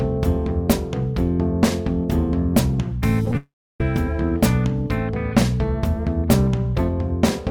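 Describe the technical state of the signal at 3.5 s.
At 3.5 s the audio is gone: from 3.37 to 3.81 s the preceding sound smears into a brief fading buzz, then drops to near silence for about 0.3 s. The likely cause is a long network dropout, with roughly 430 ms never arriving and simply skipped.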